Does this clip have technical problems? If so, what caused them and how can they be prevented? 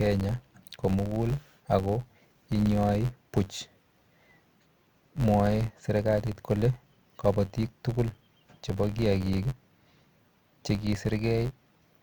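Yes. Throughout the speech there is a buzz near 86 Hz from a filter restarted on every block, which fits a 512-sample buffer. Each block starts from zero state and opens with a small transient. Unlike mains hum, the buzz rises and falls with the speech level and stops in silence. Carrying the filter state over between blocks prevents it.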